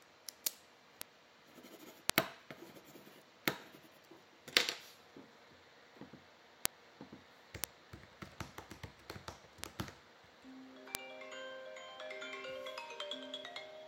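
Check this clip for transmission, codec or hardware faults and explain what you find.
Six bit error spikes occur, at 1.02, 2.10, 6.66, 7.64, 9.64 and 10.95 s. Each is a single flipped bit making one or a few sample values jump by a power of two, peaking around -16 to -4 dBFS, heard as an isolated broadband tick unrelated to the surrounding sound.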